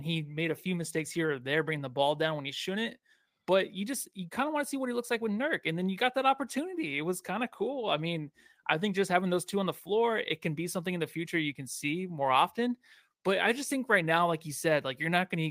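Speech recording; no technical faults heard anywhere in the clip.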